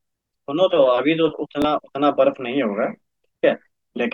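A speech clip with one Bluetooth stutter, from 1.62 to 1.64 s. About 23 ms of audio went missing, which fits a single lost packet. The receiver replayed its last slice to fill it, so it's a brief repeat rather than a silent dropout, and the speech resumes further on.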